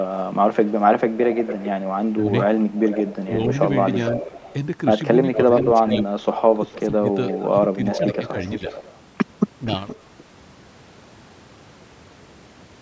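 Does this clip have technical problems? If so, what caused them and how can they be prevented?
Yes. Echo leak: the far end's echo canceller likely let loudspeaker pickup through, so a copy of the speech delayed by about 0.46 s and about 10 to 15 dB quieter returns at 0.65–3.16, 3.83–4.54, 5.33–8.99 and 9.65–10.23 s. Using a headset or a better-tuned echo canceller on the loudspeaker side prevents this.

Speech suppressed in double talk: while both sides talked, the canceller likely mistook this talker for echo and turned it down, dipping the speech by up to about 15 dB at 2.17–2.32, 3.26–3.51, 5.36–5.86 and 6.54–8.36 s. Better double-talk detection, or less echo to begin with, keeps the canceller from suppressing the talker.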